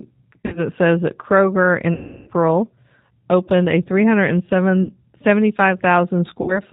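Speech coded throughout with the G.729 codec at 8 kbit/s sounds plainly rough and synthetic, because each 10 ms frame is rebuilt from a vocal tract filter, a pitch predictor and a few pulses. On a spectrogram everything above 4 kHz is empty. VoIP packet loss concealed by the speech codec occurs at 0.41–0.63 s (just before "says that", with about 120 ms lost in scattered runs), 1.95–2.30 s, 4.83–4.96 s and 6.42–6.60 s. In each gap the decoder repeats its last pitch and filter, producing a buzzy tone or coloured noise that fades. These gaps show as a smeared spectrum with a decaying waveform envelope, and the speech stays weak briefly afterwards.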